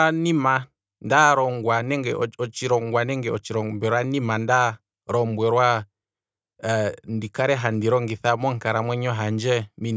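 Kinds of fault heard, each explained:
No technical faults can be heard in the speech recording, and the signal stays steady and intact throughout.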